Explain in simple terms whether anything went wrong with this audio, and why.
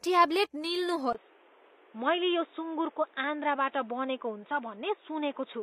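The whole recording has a gritty, metallic edge to its hiss-like sounds, such as s sounds, while the treble still seems bright. That points to HE-AAC compression as the likely cause, and the damage is plainly audible. This kind of codec keeps only the lower part of the sound properly and fakes the treble by copying lower bands upward, so the top end doesn't quite match the rest and comes out rough.

At 1.13 seconds there is a brief gap of about 20 milliseconds, and from then to the end the sound turns dull and boxy. The loudness stays about the same, but a new background noise appears and nothing above about 3.8 kHz gets through. This is the input switched to a poorer device, likely a different microphone or a headset's call mode taking over mid-recording and passing a much narrower range of sound.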